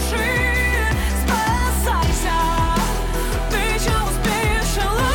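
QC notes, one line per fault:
No faults to note.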